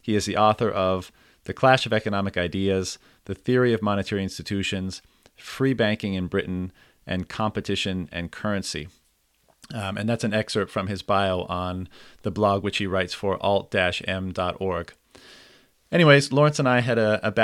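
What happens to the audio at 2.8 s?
Nothing goes wrong at 2.8 s: the speech continues intact through that moment, with no dropout, click, glitch or other fault to be heard.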